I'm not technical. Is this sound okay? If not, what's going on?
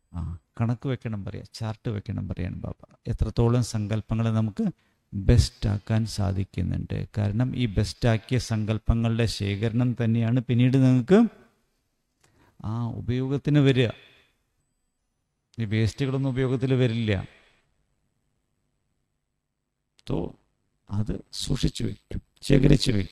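No. Overlap-add ripple runs from 17.69 s to the end. The sound was chopped into short overlapping slices and glued back together unevenly, so the volume pulses almost to silence about a hundred times a second, giving a harsh, metallic buzz.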